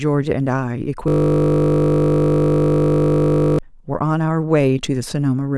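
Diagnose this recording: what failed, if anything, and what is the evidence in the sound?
System hang loop, driver or buffer stage: from 1.08 to 3.59 s the speech turns into a steady 50 Hz buzz as one 20 ms buffer replays while the host stalls. The waveform shows identical 20 ms cycles; the spectrogram shows flat harmonics spaced 50 Hz apart.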